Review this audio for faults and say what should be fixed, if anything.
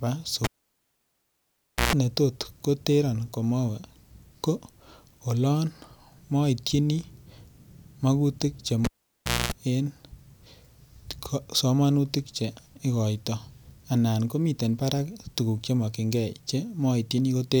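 Cable pulled and plugged in at 0.44–1.93 s and 8.84–9.52 s: a pop, about 1.4 s then 0.63 s of near silence, then 127 ms and 239 ms bursts of 60 Hz mains buzz as the plug tip makes contact, then another pop as the speech returns. The buzz sets it apart from a plain dropout. Secure the connector and mute the channel before repatching any cable.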